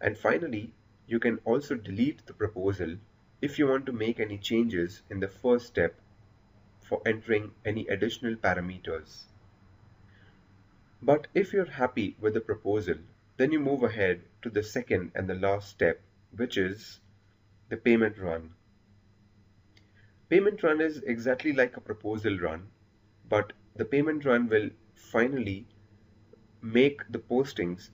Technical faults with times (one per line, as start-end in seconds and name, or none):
none